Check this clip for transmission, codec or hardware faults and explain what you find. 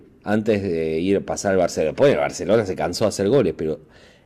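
Hard clipping occurs four times in the speech: 0.32–0.56 s, 1.12–1.65 s, 2.01–2.59 s and 3.02–3.41 s. Peaks overrun a stage's limit by about 2 to 5 dB and are sheared flat, adding high harmonics heard as crackling grit, worst at 2.0 s. Smooth saturation would sound rounded and warm, not abrupt.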